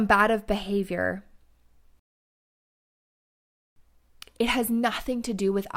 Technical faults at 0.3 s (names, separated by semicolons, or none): none